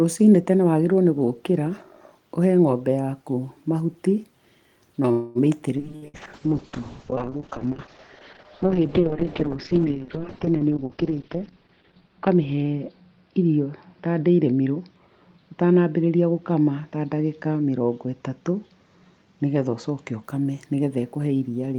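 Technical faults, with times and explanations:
5.11 to 5.38 s, call audio freeze. The speech stops and the last sound is held as a fading buzz or hiss for about 0.24 s, then carries on where it left off. Nothing is lost; the pause most likely comes from packets held up in transit while the jitter buffer ran dry.
5.77 s, skip ahead. Playback jumps forward with almost no gap. Roughly 70 ms of speech is gone, and the two sides are butted together. A stretch of audio was discarded because later audio was already waiting.
5.82 to 20.30 s, call bitrate drop. The encoder is pushed from 32 kbps down to 6 kbps, staying at the bottom for about 5.4 s. Coding turns coarse and watery, and the top end is cut from 20 kHz to 6 kHz, so the speech sounds muffled.
5.96 to 6.05 s and 6.08 to 6.17 s, burst of packet loss. Twice in quick succession, about 60 ms of speech is lost. The receiver stretches the last sound into a dimming buzz or hiss for roughly 60 ms, then resumes further on with the middle missing.
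6.48 to 7.37 s, jitter buffer slow-down. The speech plays at about 95% speed with unchanged pitch. Single pitch periods are repeated to build up a reserve, adding about 53 ms. Sounds become drawn out.
10.81 to 12.01 s, jitter buffer speed-up. The speech runs at about 119% speed, pitch unchanged, and sounds hurried. The buffer held too much audio, so short pieces of a pitch period or so were cut out repeatedly, roughly 200 ms in all.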